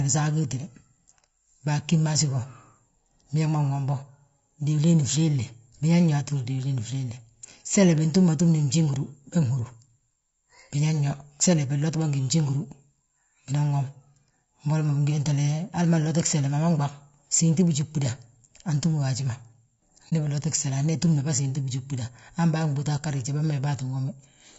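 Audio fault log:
throughout: low-delay AAC compression. The speech sounds rough and grainy, with noise filling the gaps between voice harmonics and a thin, synthetic-sounding top band. This is likely the short-frame AAC-ELD codec at a rate that fits about 32 kbps. Its grain, unlike band-limiting, isn't a simple dull top end.
20.09–20.13 s: AAC frame loss with muting. The sound fades down into a brief dip and back up, which fits one lost frame of about 30 ms whose spectrum the decoder zeroed. The overlapping windows soften both edges, unlike a hard sample dropout.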